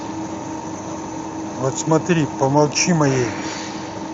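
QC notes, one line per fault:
No faults are present in this speech clip, which carries the light coding texture of a Speex path at a fairly generous quality setting.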